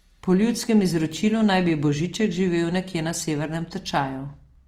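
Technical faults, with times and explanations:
Throughout: Opus compression. The speech sounds grainy and rough, with a noisy fizz where clean detail should be, and this is plainly audible. That points to the likely cause, an Opus encoder in its music mode at a low rate, around 24 kbps, filling starved bands with folded or noise content instead of leaving gaps. On a spectrogram the bands stay full but harmonics look smeared and speckled, and nothing appears above 19.8 kHz.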